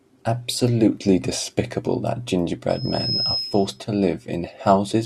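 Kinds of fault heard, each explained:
Loudspeaker feedback squeal: The microphone picks up the loudspeaker it feeds, and the loop gain exceeds one at a single pitch. Here a tone near 5.1 kHz appears at 2.69 s. It swells over about half a second to roughly the speech's level, then stops at 3.81 s.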